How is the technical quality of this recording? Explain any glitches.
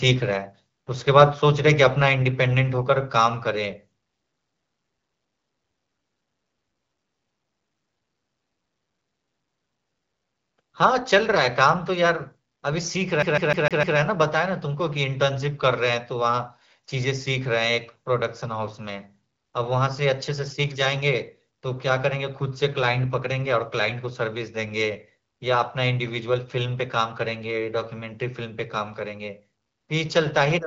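Two glitches stand out in the speech, both brief; the band-limited, lightly coded sound of AMR-WB wideband telephony, with nothing above 7.6 kHz, runs throughout.

From 1.20 to 1.24 s, a harsh crackle sits on a loud peak, likely microphone overload: the signal exceeds the converter's ceiling by about 3 dB, flattening a small share of samples.

From 13.2 to 14.0 s, the CD gets stuck on one turn, replaying a 152 ms fragment five times with a muted jump each pass, producing an even, rapid stutter.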